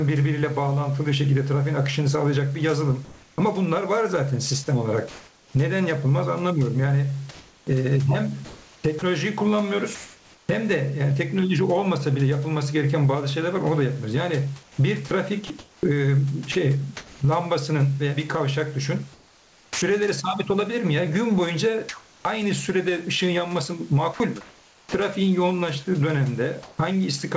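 Gain pumping runs through the whole clip. The level swings by around 20 dB. The likely cause is gain set far too high, with a fast limiter pulling it back down.

From 3.05 to 9.02 s there is comfort noise in place of the background, about 1.56 s of it in total. The real room noise, about 29 dB below the speech, gives way to a flat, featureless hiss. The likely cause is discontinuous transmission, with the receiver filling pauses with synthetic noise.

At 8.99 s, sound is dropped by the voice detector. About 30 ms of speech vanishes into steady noise. The detector likely mistook a quiet edge for background and stopped sending.

From 14.63 to 19.82 s, sound is chopped by the voice detector. About 1.41 s is replaced. The speech drops out in two or more holes. The detector likely switched on and off repeatedly.

From 21.89 to 26.78 s, comfort noise again replaces the background, about 1.08 s in total. 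It has the same smooth, featureless texture, likely from the same pause filling.

From 24.14 to 24.20 s, sound is dropped by the voice detector. About 60 ms of speech turns to noise. This is likely another missed trigger. Through the G.722 call path, nothing is heard above 8 kHz.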